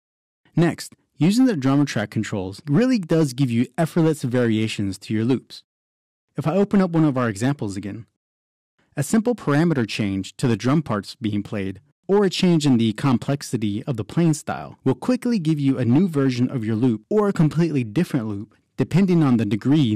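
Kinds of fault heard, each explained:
Hard clipping: the signal is driven roughly 7 dB past what a stage can hold, so peaks are sliced flat. A few percent of samples are cut, giving crackly harshness on louder moments rather than the constant smooth fuzz of soft saturation.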